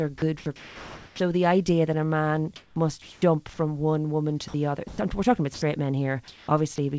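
A speech clip, carried over a wideband call codec with no content above 8 kHz, that sounds choppy at 0.18–1.20 s, 2.56–3.22 s and 4.48–4.98 s. Syllables and word edges flicker into flat synthetic hiss there, about 760, 400 and 160 ms of it respectively. This is likely sound chopped by the voice detector as it toggled transmission. Brief dropouts at 5.54–5.62 s (80 ms) and at 6.76 s (20 ms) swap speech for steady noise, likely sound dropped by the voice detector misjudging quiet speech as background. From 6.28 to 6.78 s, around 220 ms of the real background turns smooth and featureless, likely comfort noise in place of the background generated during a transmission pause.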